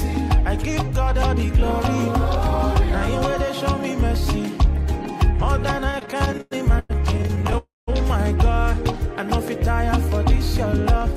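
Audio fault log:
5.91 to 7.56 s, repeated stalls (stutter): packets kept arriving late, so the jitter buffer ran dry 23 times, the longest gap 104 ms. The receiver stretched the last sound to cover about 440 ms, roughly a quarter of this span, so the audio drags and stutters with nothing lost.
7.58 to 7.89 s, call audio freeze: packets were likely held up in transit, emptying the jitter buffer for 299 ms. The last sound carries on as a fading buzz or hiss, then 190 ms of silence, before the audio resumes where it stopped, now running 299 ms later.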